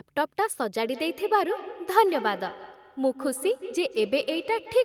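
From 0.82 s, feedback echo between two devices: another device replays this microphone uncancelled, so speech recurs roughly every 150 ms, ringing, about 13 dB down.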